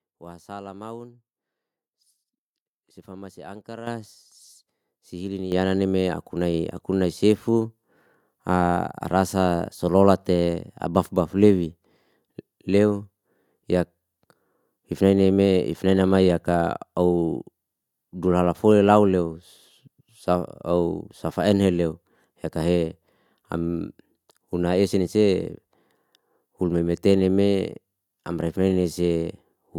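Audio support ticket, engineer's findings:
Speech and room noise jump louder together, abruptly, twice: at 3.87 s by about 10 dB, then at 5.52 s by about 8 dB, just before "yananni me". No fade, no recovery. Microphone volume stepped up: call software judged capture too quiet and raised the device input gain in single steps. The level change sits upstream of processing, so background and voice scale identically. Suspect automatic input-gain control on the microphone device.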